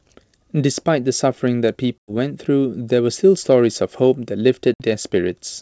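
Hard-edged silent gaps at 1.99 to 2.11 s (100 ms) and 4.74 to 4.83 s (60 ms) recover with brief distortion: packet loss on an ADPCM call knocks the decoder's predictor out of step.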